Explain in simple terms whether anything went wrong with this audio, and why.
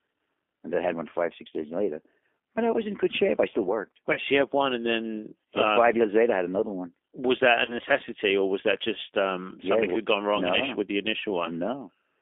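G.729 codec damage runs through the whole recording. This phone-call codec rebuilds speech from a rough model of the throat and a handful of pulses per tiny time slice instead of sending the real sound. The result here is plainly rough and slightly robotic, and the sound is squeezed into a narrow phone band, roughly 250 Hz to 3.5 kHz, so it sounds thin and muffled.

VoIP packet loss concealed by the speech codec happens twice: from 4.13 to 4.19 s, just before "so you had one", and from 7.65 to 7.76 s, between "that a" and "or was that just". Each time, a small piece of audio, about 30 ms, never arrived. The decoder filled the gap by repeating its last guess and fading it, which gives a brief buzzy or noisy smear. Because each slice builds on the previous one, the sound stays shaky for a moment after the gap.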